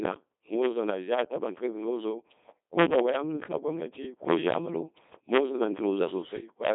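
Throughout, a Codec 2 vocoder rebuilds the speech from sine waves, fitting 2.4 kbit/s: heavy robotic buzz, not a waveform codec's warble, nothing above 3.8 kHz.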